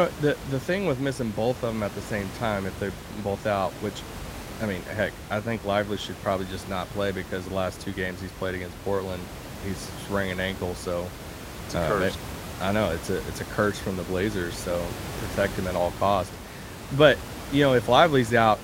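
No technical faults occur at any point in this speech clip.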